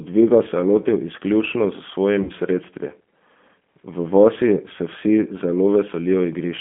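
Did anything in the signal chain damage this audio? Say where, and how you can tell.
Yes. The G.729 codec stage shapes the whole clip. The speech is confined to a telephone band of roughly 200 Hz to 3.4 kHz, and it carries the plainly audible roughness and slightly synthetic edge of a low-rate CELP coder. The sound is rebuilt from a vocal tract filter, a pitch predictor and a few sparse pulses per subframe, so fine detail is lost. The character points to G.729A at about 8 kbit/s.

There is VoIP packet loss, concealed by the speech codec, at the network stage from 2.23 to 2.31 s. About 60 ms of audio went missing, which fits two lost packets. Instead of a hard gap, the decoder carries its last pitch and filter forward and lowers the gain frame by frame. The speech there is stretched into a buzzy tone or a coloured noise that fades. Because each frame builds on the previous one, the speech stays weakened briefly after the real packets resume.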